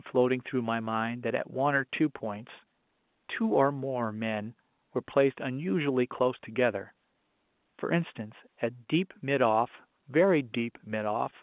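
No faults appear anywhere in this speech recording.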